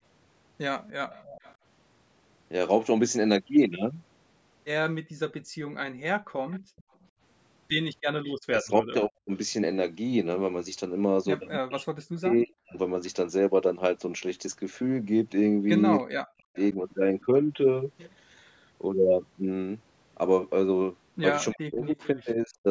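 At 0.88 to 1.55 s a faint copy of the speech trails the main sound by about 300 ms, sitting well below it. This is an echo leak. The likely cause is a far end playing the call on a loudspeaker, with its echo canceller letting part of what its microphone picked up pass back down the line.

From 5.02 to 7.14 s the room sound dips out in short patches that add up to under a second, dropping as far as about 33 dB before returning. This is background gated by the echo canceller, which clamped the microphone down while its loudspeaker was playing and released it afterwards.

The same echo leak returns at 6.51 to 8.32 s, again trailing by about 302 ms, and likely arises from the same uncancelled loudspeaker pickup.

Between 8.35 and 12.76 s the talker's voice dips sharply and breaks off in pieces, roughly a second and a half in all, at times almost vanishing. This is speech suppressed in double talk. 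Both sides were likely speaking at once, so the canceller could not tell its own talker from the echo and turned both down.

At 16.0 to 17.25 s a fainter echo leak appears, delayed about 305 ms, and this is likely the same residual loudspeaker sound. Over 16.01 to 16.77 s the voice is also pushed down for about half a second, likely as double-talk suppression.

At the end, from 21.52 to 22.07 s, another echo leak shows up about 306 ms behind the speech. It is likely caused, as before, by leaked loudspeaker audio. Alongside it, from 21.52 to 22.67 s, the speech is suppressed in double talk for about a second, likely because the canceller again clamped down during overlapping talk.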